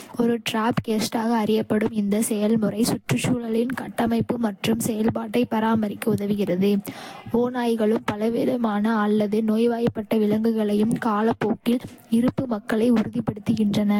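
From start to finish the speech carries generation loss. It sounds swirly and hollow, with smeared consonant attacks and nothing above about 16.7 kHz. That's more damage than a single lossy encode at this quality would leave. The likely cause is the audio being decoded and re-encoded roughly five times, each pass re-quantising on a shifted frame grid so the noise and spectral holes stack up. The character points to Vorbis at around 64 kbit/s.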